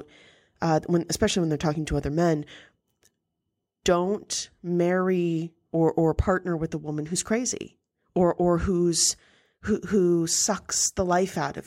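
From the start to 6.30 s there's sample clock jitter on the speech. The converter clock wanders by something under a microsecond, so samples land early or late. That leaves a fine hiss roughly 45 dB down, thickening on louder, brighter sounds and vanishing in pauses.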